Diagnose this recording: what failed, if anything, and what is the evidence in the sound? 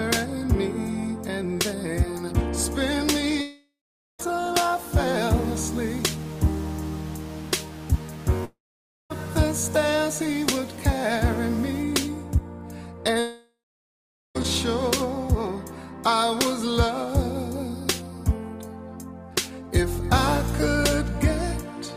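A long network dropout, likely a packet-stream interruption, occurs at 3.41 to 4.21 s, 8.45 to 9.12 s and 13.20 to 14.37 s. Each time the last sound is stretched into a fading buzz and then falls to silence for about 0.49, 0.55 and 0.81 s. The audio resumes with roughly 0.78, 0.66 and 1.16 s missing. That lost material is what separates this from a brief glitch or a mute.

Low bit depth without dither, likely from a sample-format conversion stage, runs from 4.55 to 11.83 s. It is grainy distortion that rises and falls with the signal, and quiet passages sputter or vanish. This fits 6-bit truncation with error roughly 25 dB below the signal. Unlike steady hiss, this grain is tied to the signal.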